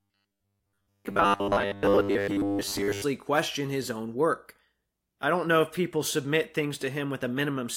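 Speech opens with robotic sound from repeated short buffers from 0.01 to 3.04 s: a rigid metallic buzz locked at 100 Hz. That fits a 10 ms buffer likely being looped while most real audio is skipped. Unlike dropouts, it leaves no silent gaps.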